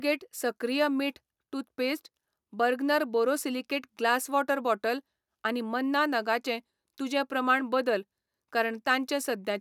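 No technical faults can be heard anywhere in the recording, and the signal stays steady and intact throughout.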